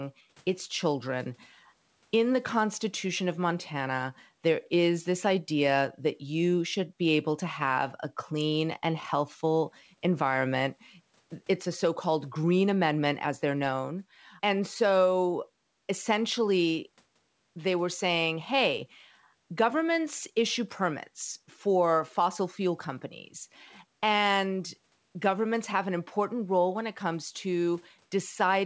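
There are no technical faults to describe in time order in this speech.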